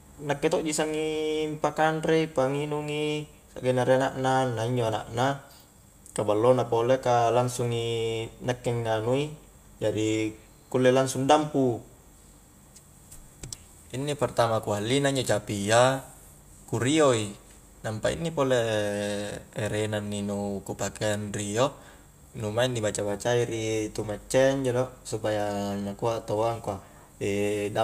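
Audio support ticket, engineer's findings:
No faults found on review of the speech recording. Nothing to escalate from the audio side.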